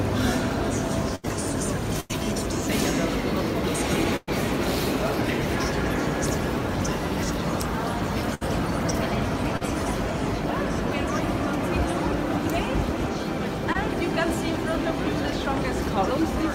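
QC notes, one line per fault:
1.15–2.14 s, repeated packet loss (robotic sound): Four separate holes fall within this second, the longest 91 ms, about 180 ms missing in all. Each is patched by extending the preceding sound, so roughly a fifth of the stretch is synthetic, giving a choppy stutter. On a spectrogram, harmonics flatten into smeared horizontal bands at each gap. The waveform shows repeated near-identical cycles before the real signal jumps back in.
4.16–4.29 s and 8.34–8.43 s, burst of packet loss: Consecutive packets went missing, about 120 ms at the first spot and 60 ms at the second. The receiver held the last sound and faded it, so each gap is a sustained buzz or hiss that decays, with about 10 ms of near-silence in the first. The audio then resumes further along, with content skipped. A spectrogram shows frozen, dimming spectral lines. The waveform shows a tapering repetitive envelope ending in a discontinuity.
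9.57–9.63 s and 13.73–13.76 s, short concealed packet loss: Brief holes of about 40 ms and 20 ms were filled by extrapolating the prior signal, then crossfaded back. They register as a quick smear or wobble where a short transient may vanish. On a spectrogram, a thin vertical strip shows stretched, blurred energy lacking onset detail. In the waveform, a few periodic cycles replace the original shape, with a slight seam at the rejoin.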